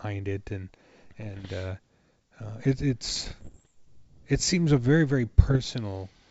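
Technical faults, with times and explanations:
1.21–1.50 s (after "it and"), 3.09–3.71 s (before "it seems a very") and 5.44–5.57 s (after "seems a very very"), bit errors on an ADPCM link: pops, rough crackling bursts and brief level jumps. Under one percent of bits flip on the G.722 link, and each error throws off the decoder's step size and prediction, so the damage rings on for milliseconds.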